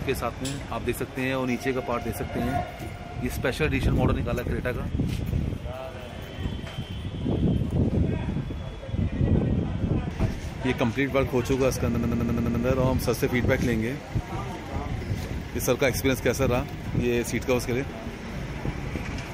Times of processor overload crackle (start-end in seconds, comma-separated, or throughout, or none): none